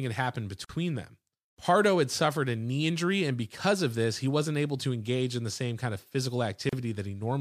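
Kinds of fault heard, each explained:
Gap at a join of encoded pieces: separately encoded chunks were butted together with their padding left in, so silent holes of 47 ms after "had happened" and 34 ms open, six seconds apart.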